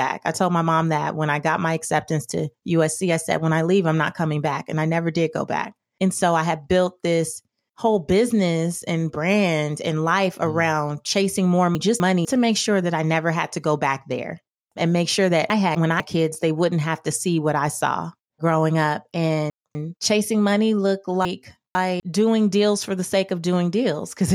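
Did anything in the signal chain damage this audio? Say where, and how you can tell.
Yes: chunks out of order at 11.75–12.25, 15.5–16.0, 19.5–20.0 and 21.25–22.0 s. Late 250 ms chunks play after their successors, causing jumbling but no missing audio, unlike dropouts.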